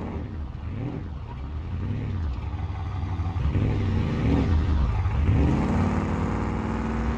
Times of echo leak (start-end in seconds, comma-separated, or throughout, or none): none